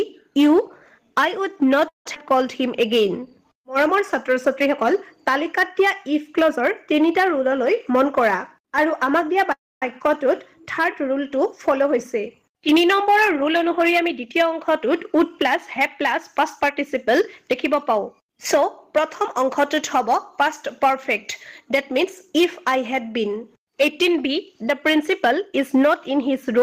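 At 1.88 to 2.06 s there's a call audio freeze: the last bit of sound hangs on as a fading buzz, then about 140 ms of near silence, 171 ms of fill in all. Packets were likely held up and the jitter buffer ran dry. Playback then resumes where it stopped, with nothing lost.

Right after, at 2.14 to 2.17 s, it skips ahead. Roughly 150 ms of audio is gone and the two sides are butted together almost directly, which takes back most of that added delay.

From 2.24 to 4.35 s there's a jitter buffer slow-down. Repeated pitch periods stretch things to 94% speed, adding 140 ms. The sound drags a little at unchanged pitch while the buffer rebuilds its reserve.

At 7.35 to 9.38 s a jitter buffer speed-up runs at 105%, trimming roughly a tenth of a second of short pitch-period slices, so the sound feels a touch hurried but keeps its pitch.

A second freeze hits at 9.52 to 9.83 s: 292 ms of fill, about 240 ms of it silent, with the same decaying tail first and no audio missing afterwards.

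Two more gentle speed-ups follow at 102%, from 13.0 to 18.23 s removing roughly 150 ms, and from 21.71 to 26.57 s removing around 100 ms, as the buffer works its delay back down.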